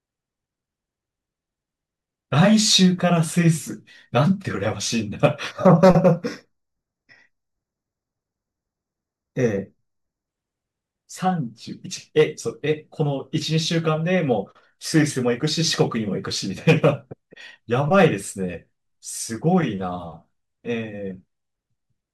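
A speech clip with channel delay (comb filtering) from 5.51 to 10.28 s. One channel arrives a fraction of a millisecond late, and the summed mono cancels at evenly spaced frequencies. The first notch sits around 3 kHz. The speech turns hollow and phasey.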